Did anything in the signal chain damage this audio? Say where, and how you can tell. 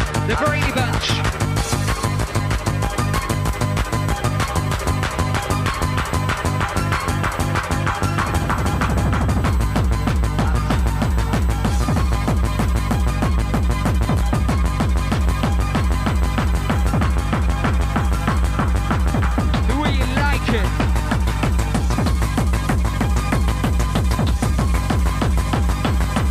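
Yes. USB whine enters in the analogue wiring, through shared power or ground. A steady 1 kHz tone starts at 0.58 s and runs to the end, roughly 25 dB below the signal. That pitch matches the bus's 1 ms frame rate, so current pulses are leaking into the audio path.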